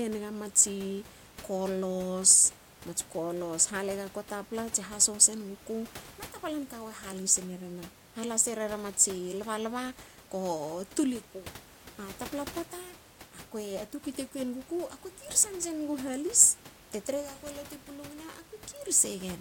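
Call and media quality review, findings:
Nothing stood out on listening to this speech clip; the only background is the room noise, sitting about 21 dB below the speech.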